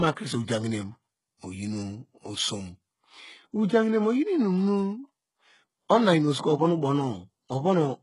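Throughout the recording, the speech has likely passed through HE-AAC compression at a very low bitrate, with heavy damage that fits a rate of around 12 kbps. Only the lower spectrum is properly coded. The treble is synthesised by copying those bands upward under a coarse envelope, so its harmonics fail to line up with the real ones. S sounds come out gritty, metallic or lispy, and nothing remains above 11.1 kHz.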